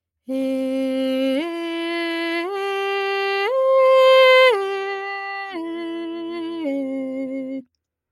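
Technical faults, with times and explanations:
Throughout, noise suppressor applied to music or sounds: a speech-tuned suppressor is treating the music's sustained parts as noise, so held notes and tails keep dipping while attacks punch through. The level swings by roughly 5 dB, giving a pumping, thinned-out feel.
5.18–5.56 s, sound cut by the noise suppressor: here the suppressor clamps down harder, pulling this passage down by as much as about 8 dB for around 400 ms. The steady, decaying part sinks and its tail gets clipped short.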